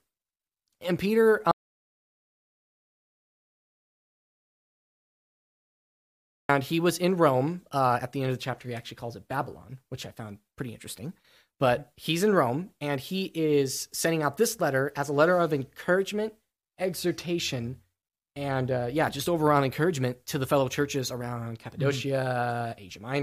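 Audio dropout to silence from 1.51 to 6.49 s in this speech: about 5 s of dead silence, likely from a lost input, before "he was in" resumes.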